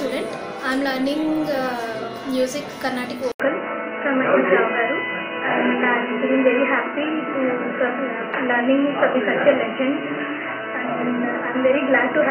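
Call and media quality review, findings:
Input switched to a poorer device, 3.32 s to end. About 80 ms dropout, then sound capped near 3 kHz, roughly 5 dB level shift, new noise floor about 30 dB down. Likely a headset call profile taking over. Unlike a codec bandwidth drop, the gap, new noise and level step arrive together and never recover.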